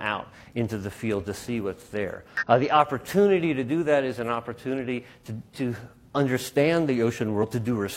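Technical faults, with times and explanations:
2.37–2.44 s and 7.39–7.45 s, damaged data in a compressed stream: two brief bursts of about 64 ms each, where corrupted bytes in the encoded stream made the decoder misread its frames and lose sync until it found a valid frame header again. The result is a short, unnatural chirp, squawk, click or short hole. On a spectrogram each appears as a narrow vertical break that stands out from the surrounding texture. The waveform shows an abrupt discontinuity at each edge.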